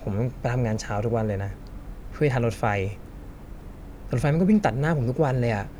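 No technical faults can be heard anywhere in the speech; the signal stays continuous and intact throughout.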